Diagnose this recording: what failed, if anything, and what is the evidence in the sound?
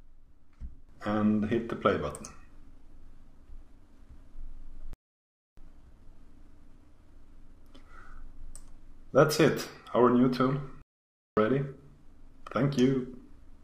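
Playback stall, at the playback stage: the sound drops to silence from 4.93 to 5.57 s, about 0.64 s, then again from 10.82 to 11.37 s, about 0.55 s. Likely the player's buffer ran dry or its thread got blocked, so output simply halted until it caught up.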